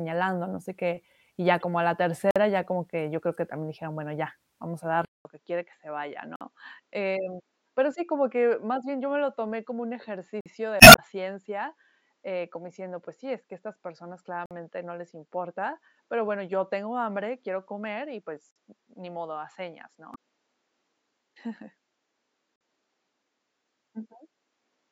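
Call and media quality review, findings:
Damaged data in a compressed stream: short glitches at 1.60 s (right after "sé qué y ya"), 10.77–10.99 s (adds about 22 ms) and 20.11–20.16 s. The decoder is losing frame sync and hunting for the next header.

Gap between chunks: 50 ms holes at 2.31 s (between "a la" and "ya como que yo"), 6.36, 10.41, 14.46, 18.51 and 22.56 s. The 4 s spacing points to the chunking or playback layer padding each join.

Input switched to a poorer device: after "bueno ya vamos a", there's a 200 ms dropout at 5.05 s. From then to the end the sound is dull, with nothing above 7.6 kHz, about 5 dB quieter, and a new noise floor about 50 dB down. The likely cause is a mic or headset profile change.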